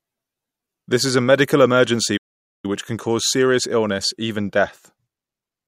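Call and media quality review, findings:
Speech cuts to silence mid-flow after "is a medical emergency", 2.17–2.65 s (~470 ms), resumes at "which can cause serious". Playback stall, likely player buffer underrun or blocked audio thread.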